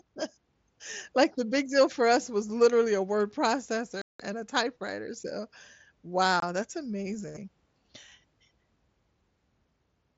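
Unconcealed Bluetooth headset packet loss hits at 4.02–4.20 s, just before "and a typewriter so", and at 6.40–6.43 s, before "that's amazing". Voice packets between headset and phone went missing and nothing filled them, leaving abrupt holes of 180 ms and 22.5 ms.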